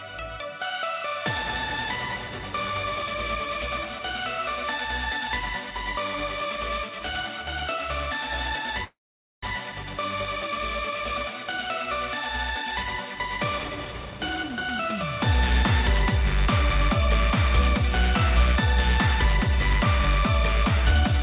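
Packets were most likely held up in transit, emptying the jitter buffer and causing a call audio freeze from 8.84 to 9.45 s. The last sound is stretched, then about 470 ms of silence follows before the audio resumes where it stopped, with nothing lost. Later, with excess audio queued, jitter buffer speed-up removes short pitch-period slices, running the sound hurried at the same pitch: 134% speed from 13.61 to 14.58 s, dropping roughly a third of a second, then a milder 105% from 19.47 to 21.13 s, cutting about a tenth of a second. Throughout, the telephone-grade G.711 path leaves nothing above 4 kHz.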